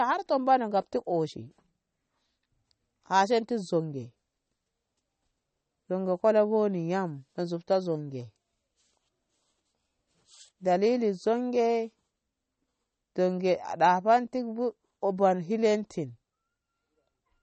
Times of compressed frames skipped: none

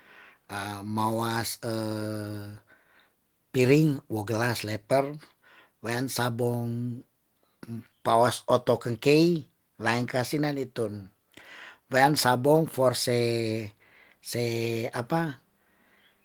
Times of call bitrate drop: none

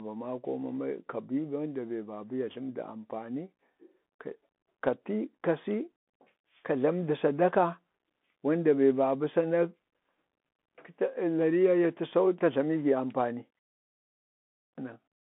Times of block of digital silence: none

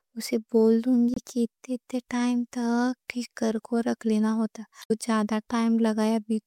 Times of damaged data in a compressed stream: 1.14-1.18, 4.80-4.91

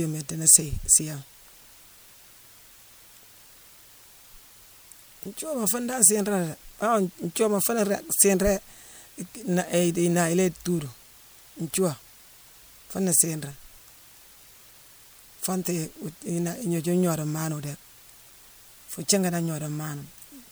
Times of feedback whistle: none

